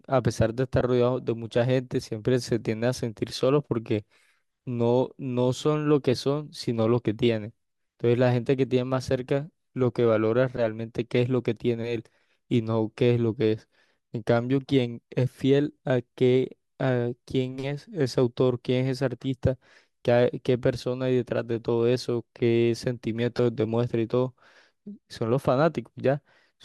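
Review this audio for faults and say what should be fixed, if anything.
Lost LE Audio frames cause three brief dropouts in the speech: at 0.80 s (about 10 ms), 20.03 s (about 20 ms), and 23.37 to 23.39 s (about 20 ms). The gaps fit one and two lost 10 ms frames. The LC3 decoder filled each one by repeating the last spectrum with randomised signs, which leaves a short noisy smear instead of a clean gap. Prevent this by improving the Bluetooth link margin (distance, interference, retransmission settings) so frames arrive intact.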